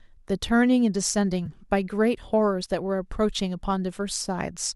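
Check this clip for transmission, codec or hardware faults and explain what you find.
One transmission fault occurs in this speech. At 1.46 s, AAC frame loss with concealment: about 10 ms of data never arrived, consistent with one dropped low-delay frame. The decoder rebuilt the gap from the preceding spectrum, leaving a brief smeared, slightly noisy blip. The faint roughness heard throughout comes from light low-delay AAC compression, likely AAC-ELD, the codec path itself.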